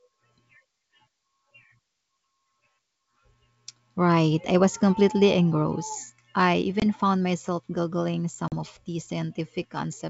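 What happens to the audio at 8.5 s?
The speech cuts to a hard-edged silent gap from 8.48 to 8.54 s, then returns slightly distorted before settling. This is packet loss on an ADPCM call: about 40 ms, roughly two packets, went missing, and the decoder's adaptive predictor and step size drifted from the sender's.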